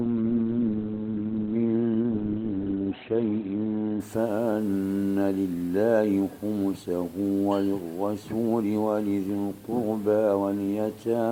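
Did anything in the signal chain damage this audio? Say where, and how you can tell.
Yes. This is an adaptive stream starting at a low bitrate, at the network and playback stage. From 0 to 4.0 s nothing reaches above 4.2 kHz. Codec artefacts are stronger. At 4.0 s quality jumps, with no gap. This fits a 12 kbit/s start stepping up to 64 kbit/s.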